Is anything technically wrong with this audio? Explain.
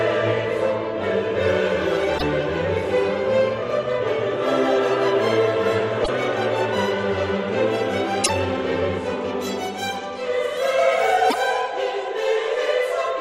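Yes. There are two faults.

Damaged data in a compressed stream occurs four times, at 2.15 to 2.23 s, 6.01 to 6.09 s, 8.22 to 8.30 s and 11.27 to 11.35 s. Corrupted bytes make the decoder misread frames and lose sync. Each event is a brief chirp or blip lasting about 80 ms.

Pre-emphasis left on begins at 9.41 s and runs to the end. The treble boost of the CD 50/15 µs curve was applied without the matching de-emphasis, so 10 kHz sits about 8 dB above 1 kHz. The sound turns thin, bright and sibilant.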